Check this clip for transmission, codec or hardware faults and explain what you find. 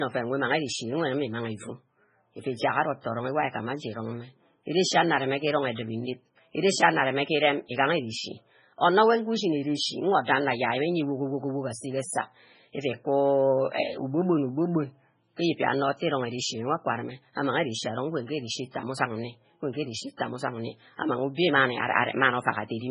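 Two codec faults are audible in this speech clip.

Throughout, likely heavy MP3 compression at a very low bitrate, around 16 kbps, removes everything above 10.5 kHz, leaving watery, swirling speech with metallic sibilants.

Pre-echo appears at 3.01 s, 18.71 s and 20.17 s. Coding noise spreads before each sharp attack for about 39, 37 and 27 ms, heard as brief hiss and softened onsets.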